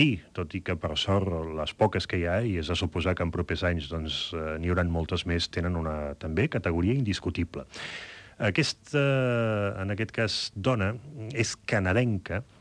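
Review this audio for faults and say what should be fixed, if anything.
Nothing here needs fixing, as no technical faults turn up anywhere in the recording.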